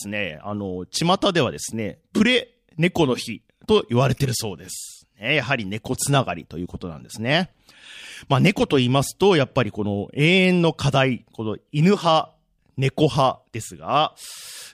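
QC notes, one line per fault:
No faults heard in this speech recording.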